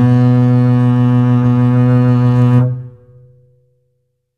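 No technical faults can be heard anywhere in this music clip; the signal stays steady and continuous throughout.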